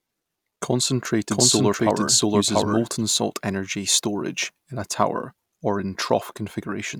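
A speech recording with a doubled audio track from 1.31 s to 3.03 s. A second full-band copy of the speech runs roughly 0.7 s behind the original at about the same level. It has no decay or added room tone, so it reads as a clean overlapping duplicate, and it begins and ends abruptly at those times. The likely cause is the signal being picked up a second time through a slower path.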